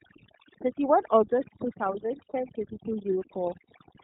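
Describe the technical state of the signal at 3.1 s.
At 3.1 s the speech sits over a near-silent background with twinkling specks. This is overdone noise removal, present throughout, stripping frequency bands near the noise estimate along with quiet speech detail. The speech is also band-limited with nothing above 4 kHz, and has a plainly audible rough, synthetic edge. This is the iLBC codec, also present throughout, which encodes each frame's excitation independently, consistent with its 30 ms frame mode at roughly 13 kbps.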